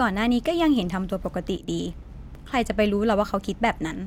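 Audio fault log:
1.57–1.68 s, sudden gain jump: the digital gain was likely switched without a ramp, falling by about 8 dB between one sample and the next and returning just as abruptly, so the speech and its background noise drop together for roughly 0.12 s.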